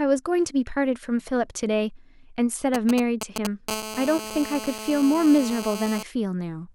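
From 2.74 s to 3.47 s, GSM signalling bursts cut into the speech: a galloping dit-dit-dit of ticks and brief buzzes, sitting only a few decibels below the speech. A nearby 2G handset is sending short groups of radio bursts, as it does when setting up a call, and the audio circuitry is rectifying that RF into the signal path. Each group carries the handset's 217 Hz frame rate, which gives the ticks their buzzy core.

At 3.69 s the pattern turns into continuous GSM phone buzz, which runs until 6.03 s at about 11 dB below the speech. The handset is now in a call and transmitting steadily, 217 times a second. The circuit demodulates the pulse train as before, producing a hard, raspy 217 Hz tone with a dense stack of harmonics. The buzz holds a constant pitch and level that have nothing to do with the speech underneath.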